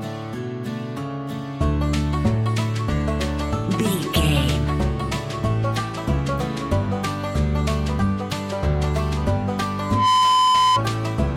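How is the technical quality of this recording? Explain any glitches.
The recording has one clear glitch, near the end. Loudspeaker feedback squeal runs from 9.78 to 10.82 s: the microphone picked up its own loudspeaker, and the loop gain passed one at 1 kHz. That tone swells over about a third of a second into a steady whistle, sitting roughly 5 dB above the surrounding sound.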